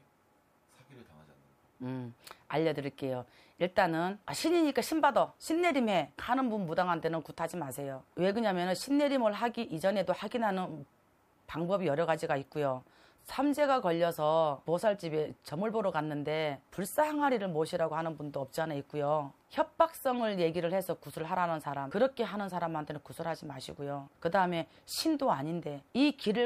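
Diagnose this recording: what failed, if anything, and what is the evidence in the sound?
Nothing failed, and the sound gives no evidence of a fault at any stage.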